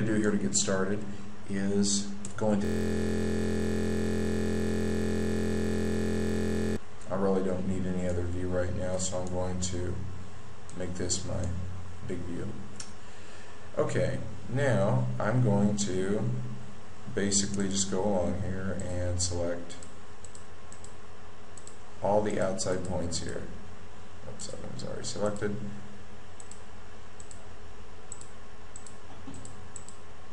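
From 2.65 to 6.77 s the audio freezes into a steady 43.1 Hz buzz, a system hang loop: a 23.22 ms fragment repeating, which fits a 1024-sample buffer replayed while the system stalled.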